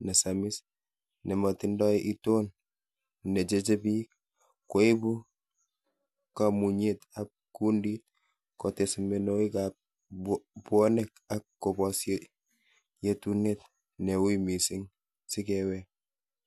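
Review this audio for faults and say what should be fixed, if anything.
No faults can be heard anywhere in the speech. Nothing here needs fixing.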